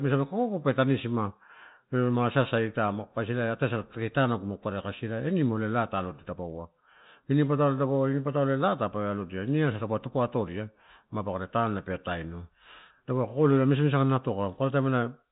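No technical faults can be heard in this speech.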